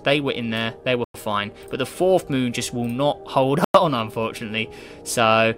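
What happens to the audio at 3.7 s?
Right there you hit a gap between chunks: the sound drops out completely from 3.64 to 3.74 s, a clean 100 ms hole. The audio arrived in 2.5 s chunks, and silence got left at the join, so it's interrupted rather than lost.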